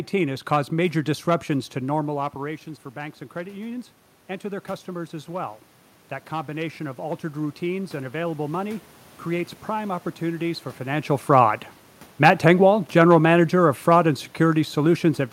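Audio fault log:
6.30–8.88 s, automatic gain rising: the gain control judged the input too quiet and lifted its level gradually, by about 3 dB over two and a half seconds, so the sound and the room noise swell together before "creates prime opportunities for". On a waveform the envelope and the noise floor climb as one slow ramp. A spectrogram shows every band brightening evenly.
12.24–15.32 s, automatic gain falling: after "opportunities for financial fraud" the gain control judged the input too loud and eased its level down over about three seconds to the end. The sound sinks together with its background. A waveform shows the envelope and noise floor tapering in step, and a spectrogram shows all bands dimming uniformly.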